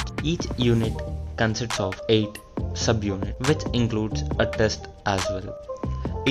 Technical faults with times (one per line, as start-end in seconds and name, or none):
none